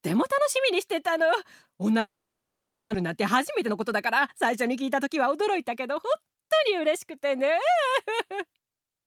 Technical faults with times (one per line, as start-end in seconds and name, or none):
1.99-2.96 long network dropout
3.08-6.69 jitter buffer speed-up